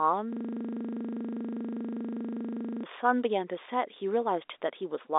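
From 0.33 to 2.83 s, a system hang loop replays one 40 ms piece of audio dozens of times. It sounds like a rattling buzz at 25 Hz.

From 3.94 to 3.96 s, packet loss with pitch repetition bridges a gap that fits one lost 20 ms packet. The repeated pitch period sounds briefly held and buzzy over the narrow G.711 telephone band.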